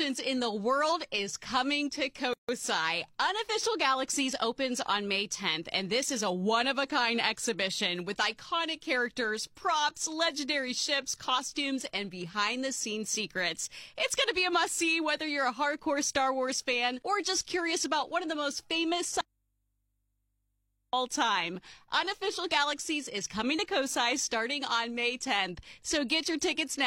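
At 2.33 s the continuous sound stops dead for about 153 ms and resumes at 2.49 s exactly where it left off. This is a gap at a join of encoded pieces: two separately encoded sections were butted together without trimming, so one encoder's start-up delay and the other's end-of-stream padding both remain as silence. On a waveform it shows as a flat strip with softened edges. A spectrogram shows a clean vertical blank band, its borders faintly smeared by the codec.

From 19.21 s to 20.93 s the sound vanishes abruptly for about 1.72 s, leaving only a low mains hum roughly 50 dB below the normal level, before it cuts straight back in. This is an audio dropout to a faint residue. The signal was likely lost upstream while the rest of the chain stayed live, so the open input passes hum. A waveform collapses to a thin, steady sliver. A spectrogram goes dark except for narrow horizontal lines at the hum frequency and its harmonics.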